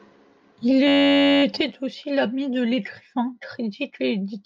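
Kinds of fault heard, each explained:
System hang loop: from 0.88 to 1.43 s the speech stops moving and becomes a steady, rigid buzz pitched at about 94 Hz, ending just before "aussi l'ami de l'écrivain". One 10.7 ms sliver of sound repeats exactly, some fifty times, which fits a 512-sample buffer. The system froze while the audio hardware kept replaying its ring buffer, and the speech resumes with essentially nothing missing.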